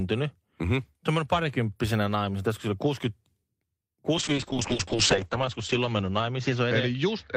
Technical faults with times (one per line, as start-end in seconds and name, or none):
4.18-7.36 call bitrate drop